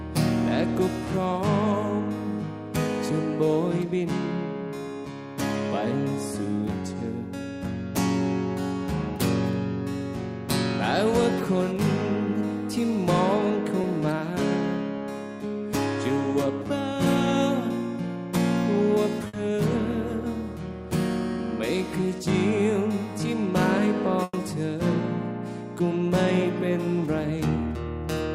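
At 13.81 to 13.85 s there's a short concealed packet loss: about 20 ms of audio never arrived, so the receiver stretched the preceding sound over the hole and blended back in, leaving a quick smear or wobble.

Then come two bursts of packet loss. At 19.27 to 19.35 s, 60 ms goes missing. At 24.23 to 24.35 s, 100 ms goes missing and the last 20 ms ends in silence. Each time the receiver carries the last sound forward while fading it down, then picks up again further on with that stretch gone.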